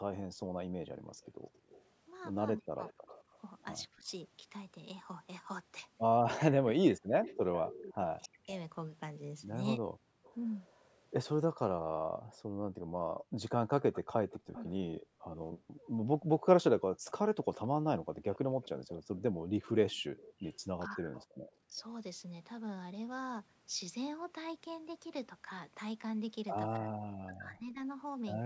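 A speech recording with three kinds of echo-canceller trouble. The background is gated by the echo canceller from 0.21 to 1.63 s and again between 10.1 and 20.12 s: the room tone plunges by about 40 dB, seen as blank gaps in the spectrogram's noise floor. An echo leak, likely from a loudspeaker-side canceller failing to remove everything, runs from 1.24 to 4.11 s and 7.24 to 21.82 s. It is a faint copy trailing the speech by 268 ms, roughly 20 to 25 dB down, visible as ghost harmonics offset to the right. Speech is suppressed in double talk at 2.58–9.82, 14.49–14.56, 20.87–21.8 and 26.77–27.82 s. The talker's level collapses by up to roughly 40 dB, likely because the canceller ducked both voices at once. On the waveform these show as sudden notches in the envelope. Energy stops at 8 kHz throughout.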